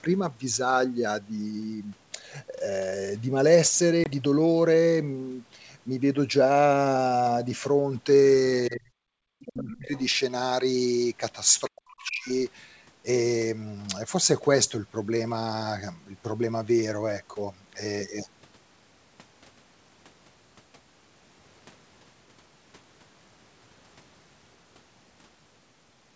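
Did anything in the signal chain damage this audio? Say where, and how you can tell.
Yes. Packet loss on an ADPCM call hits at 4.04 to 4.11 s, a sharp-edged silent hole with a slightly disturbed restart. That fits a single lost 20 ms network packet whose gap left the ADPCM decoder's predictor and step size briefly out of step with the sender's.

Speech suppressed in double talk shows as deep dips of about 40 dB at 8.69 to 9.14 s, about 35 dB at 9.5 to 9.93 s, and about 40 dB at 11.68 to 12.3 s. This likely comes from the call's echo canceller, in the call-processing stage, ducking the talker while the far end spoke.

The other side's voice leaking through appears as short scraps at 9.4 to 9.51 s, 9.71 to 9.78 s, 9.97 to 10.06 s, 11.65 to 11.7 s and 12.03 to 12.09 s, roughly 15 to 30 dB below the talker. The likely cause is loudspeaker echo that the call's echo canceller left uncancelled.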